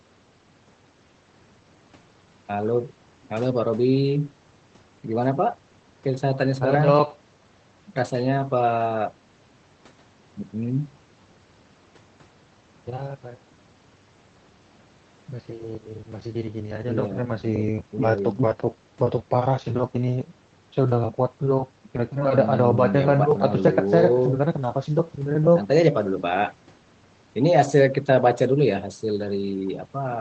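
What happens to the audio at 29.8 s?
Nothing goes wrong at 29.8 s; the speech passes through intact, carrying only the ordinary character of the call path it travels over.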